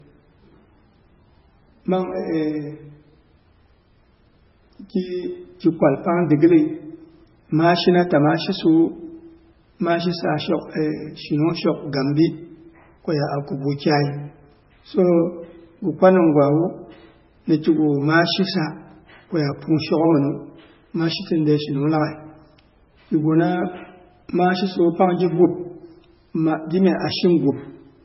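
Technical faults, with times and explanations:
Throughout, low-bitrate audio saved at a high bitrate: the speech was likely first encoded as very low-bitrate MP3, fitting roughly 16 kbit/s, then re-saved at a high bitrate that restores nothing. Nothing sounds above 5.6 kHz, so sibilants are dull, and the first encode's artefacts remain.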